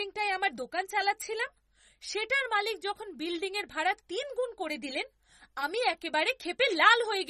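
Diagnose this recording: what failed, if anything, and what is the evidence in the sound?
Throughout the speech, nothing sounds above 13.8 kHz and plainly audible swirly, watery artefacts appear, likely MP3 compression at a starved bitrate near 32 kbps, unlike a clean low-pass filter.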